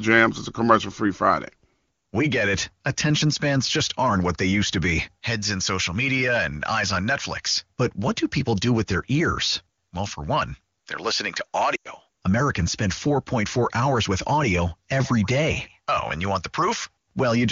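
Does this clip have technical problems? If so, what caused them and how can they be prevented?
Yes. Right after "one they're listening to", from 11.75 to 11.88 s, the sound quickly drops to near silence. These are lost AMR speech frames: radio errors corrupted about 100 ms of speech, roughly five 20 ms frames. The decoder filled the gap by repeating the last good settings at falling volume. Stronger radio coverage or better channel error protection would prevent it.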